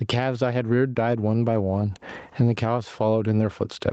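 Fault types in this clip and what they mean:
Gain pumping: throughout the clip, the gain swings by roughly 25 dB, pulled down under every loud syllable. The likely cause is microphone gain set far too high, with a fast limiter clamping it down, leaving the speech squashed and level.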